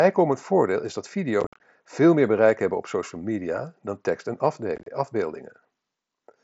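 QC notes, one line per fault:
1.41–1.60 s and 4.76–4.87 s, unconcealed Bluetooth headset packet loss: after "voordeel is dat" and "media dan tekst en", lost packets become silence or an idle pattern (120 ms, then 60 ms), giving chopped gaps with abrupt edges.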